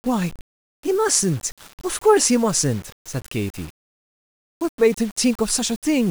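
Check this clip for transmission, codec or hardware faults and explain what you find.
One fault runs through the whole recording: low bit depth without dither. The speech carries grainy, rasping distortion that follows the signal's level, roughest in quiet syllables and word tails, where sound sputters or collapses to silence. The likely cause is requantisation to very few levels with plain rounding, which fits roughly 7-bit resolution. The error sits only about 25 dB under the speech. A waveform zoom shows staircase steps and flat runs. A spectrogram shows signal-correlated broadband hash instead of a steady noise floor.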